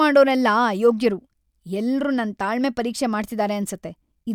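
Nothing technical goes wrong anywhere in this short speech recording; there's simply no fault to point to.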